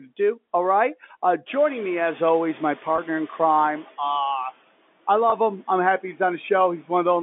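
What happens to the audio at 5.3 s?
At 5.3 s a single stretch of audio, about 20 ms and consistent with one lost packet, failed to arrive, running to 5.32 s. The receiver concealed it with packet loss with pitch repetition, looping the last pitch period it had received to fill the gap. Because the loss is so short, the fill never fades into silence. It comes across as a brief, slightly held and buzzy sustain before the sound carries on.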